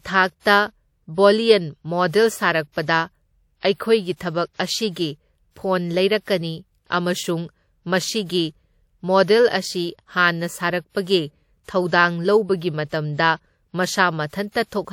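Speech with one pre-echo fault: from 0.40 to 0.45 s, a transform codec spread its quantisation noise across a block, so a short hiss runs about 56 ms ahead of a sharp attack, softening its onset.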